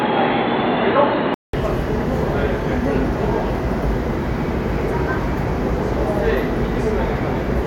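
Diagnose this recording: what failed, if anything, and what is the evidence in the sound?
From 0.0 to 1.53 s, nothing passes above 4.2 kHz. A 0.19 s silence follows before full bandwidth returns. The likely cause is an input switched to a poorer device at the driver stage.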